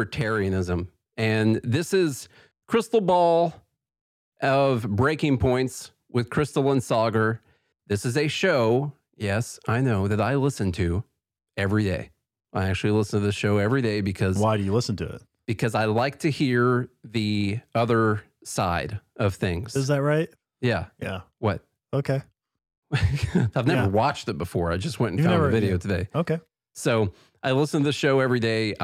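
No technical faults can be heard anywhere in the speech.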